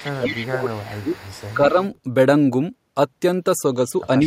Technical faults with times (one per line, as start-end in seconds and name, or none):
0.00-1.18 speech suppressed in double talk
0.16-1.54 echo leak
1.54-1.78 speech suppressed in double talk